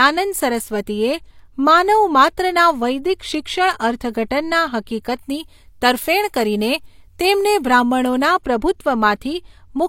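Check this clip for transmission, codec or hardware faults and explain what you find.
Two faults turn up in the speech, both in its second half.

From 5.19 to 8.25 s, pre-emphasis is left on. The treble boost was never undone, so 10 kHz sits about 8 dB above 1 kHz, which fits the 50/15 µs CD curve. The speech turns thin, bright and sibilant. Unlike added hiss, the brightness follows the speech itself and tracks its level.

At 8.44 s there is pre-echo across about 17 ms. The codec spread noise sized for a sharp attack over the whole transform block, including the quiet moment before it. A brief hiss runs ahead of the attack and softens it. Reverb or echo would trail after the sound, not precede it.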